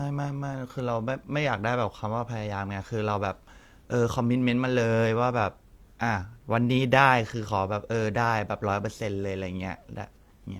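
No technical faults can be heard anywhere in the speech recording.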